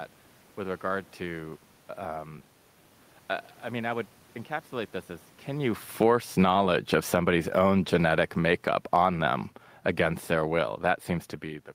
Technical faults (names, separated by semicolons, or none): automatic gain falling; automatic gain rising